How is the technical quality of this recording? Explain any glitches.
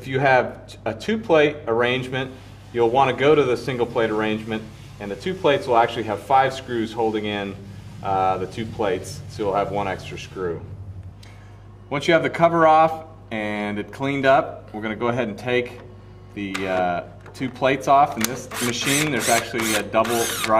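The recording carries a continuous mains hum from start to finish. A steady low tone at 50 Hz sits under the audio, with some low harmonics above it, at roughly 25 dB below the main signal. It comes from power-line energy leaking into the signal path, typically through a ground loop between connected equipment or magnetic coupling from a nearby transformer. It stays audible in quieter passages as a constant drone.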